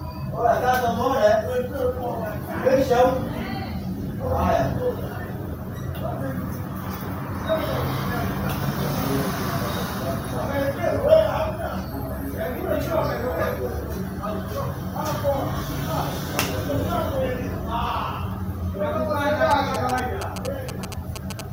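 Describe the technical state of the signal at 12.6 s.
At 12.6 s the signal is intact, with no technical fault to be heard at that moment.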